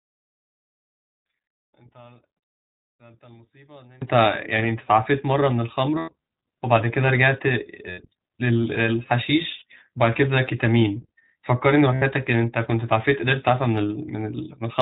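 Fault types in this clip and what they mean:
iLBC codec: The speech runs through iLBC throughout, a narrowband coder that passes nothing above 4 kHz. Each 20 ms frame is coded on its own. The damage is plainly audible as a dull, slightly rough and synthetic tone, which fits the 15.2 kbps mode.
one channel inverted: For the first 4 s the speech is about 31 dB quieter. The likely cause is one stereo channel with reversed polarity. The shared centre cancels when both channels are summed to mono. Only their faint difference remains.
lost iLBC frames: Four short dropouts occur, at 5.98, 7.90, 9.58 and 11.94 s, lasting 100, 80, 40 and 80 ms. The decoder fills each gap by repeating the last pitch cycle with noise. This gives a brief buzzy held vowel. Speech recovers at once.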